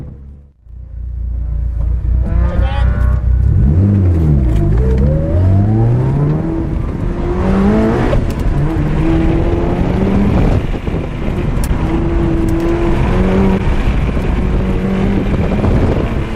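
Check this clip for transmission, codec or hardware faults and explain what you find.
Three short glitches are present, at 8.11 to 8.14 s, 11.67 to 11.69 s and 13.57 to 13.60 s. Each lasts about one 26.1 ms MP3 frame and is likely a broken MP3 bit reservoir. After missing frames, the decoder reads borrowed bits from the wrong frame, so the sound skips forward with a chirp, a burst of noise or a short hole. On a spectrogram each appears as a narrow vertical disturbance, and on the waveform as an abrupt discontinuity.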